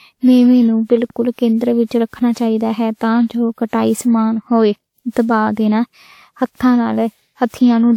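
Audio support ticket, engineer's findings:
Swirly, hollow, smeared speech across the whole clip; consonant attacks blurred. Likely generation loss: around ten lossy decode/re-encode passes, consistent with a WMA 1-type codec near 128 kbit/s, each pass requantising on a shifted frame grid. Spectrogram: accumulated holes and patchy, flickering upper bands. Waveform: softened transients.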